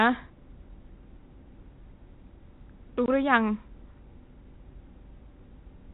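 Packet loss filled with silence at 3.06 to 3.08 s: a 20 ms stretch of the speech drops out entirely, consistent with one lost packet that the receiver replaced with silence. The gap has hard edges and sits within the 4 kHz-limited G.711 telephone band.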